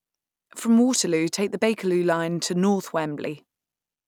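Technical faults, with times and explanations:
Nothing technical goes wrong anywhere in this bit of speech, so there's nothing to list here.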